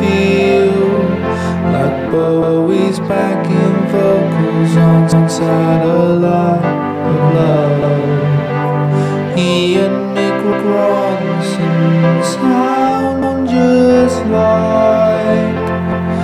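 Overlapping chunks at 2.42, 5.12, 7.82, 10.52, 13.22 and 15.92 s: each 2.5 s chunk starts 200 ms early, replaying that slice as a regular stutter at every join.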